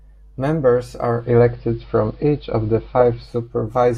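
At 1.00 s the speech shows digital radio blending to analogue: over about 376 ms it cross-fades to the AM broadcast, losing treble, shifting level about 3 dB, and adding faint hiss. A spectrogram shows a flat ceiling until the return at 3.58 s.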